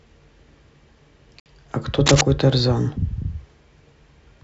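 At 1.40 s the speech drops into a hard-edged hole, then comes back between 1.40 and 1.48 s slightly distorted before settling. This is packet loss on an ADPCM call: about 60 ms, a few packets, went missing and were replaced by silence. The decoder's adaptive predictor and step size then briefly disagreed with the sender's.

From 2.06 to 2.21 s a dense, uneven scratching rustle sits over the speech, roughly 5 dB above it. This cable scratch noise most likely comes from a worn cable, connector or control being moved, with its contact resistance fluctuating rapidly.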